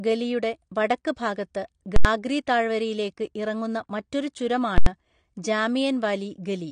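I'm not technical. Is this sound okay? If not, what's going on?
No. Two separate problems can be heard.

The first is most likely AAC compression, a way of shrinking audio files. To save space, the encoder threw away detail it judged unimportant, including everything above 9.9 kHz. The speech therefore sounds dull and muffled, as if heard through a cloth, with a smeared, warbling or fizzy edge on hissing sounds and held tones. This damage is clearly audible and runs through the whole clip.

The second is invalid numbers at full scale. Twice, a calculation inside the audio software broke and produced impossible values, which were forced to the loudest level the system can output. This happens from 1.96 to 2.05 s and again from 4.78 to 4.86 s, each time for about 85 ms, which fits a processing block of 4096 samples. You hear a very loud pop or bang, with the speech completely replaced for that moment.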